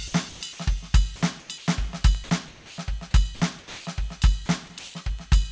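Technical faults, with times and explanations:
0.08–0.14 s, sound dropped by the voice detector: right at the start, about 60 ms of the music gives way to a flat, steady hiss before the music picks back up. What's gone is about 40 ms of real musical content. The likely cause is the sender's voice detector judging this opening to be background, going quiet, and the receiver filling the gap with comfort noise until the detector fired again.
0.29–0.41 s, 1.40–1.49 s, 1.58–1.67 s, 2.48–2.78 s, 3.59–3.86 s and 4.79–4.94 s, comfort noise in place of the background: in the quiet stretches between louder passages, about 23 to 28 dB down, the real background goes smooth and featureless for 90 to 300 ms at a time. It's usually slightly quieter too, by up to about 4 dB, though at 4.79 s the level barely changes. This likely comes from discontinuous transmission: the sender pauses, and the receiver synthesises noise roughly matched to the background's spectrum, so the texture vanishes until the sound resumes.
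2.15 s and 5.19 s, bit error spike: each is a single sharp, broadband tick with nothing to do with the music around it. The one at 2.15 s spans three consecutive samples and the one at 5.19 s spans just one. A flipped bit on a digital link or in memory makes the sample value leap by a power of two and snap straight back, which is why you hear a click rather than any distortion of the music. Everything sits under 8 kHz, consistent with the G.722 call path at 64 kbps.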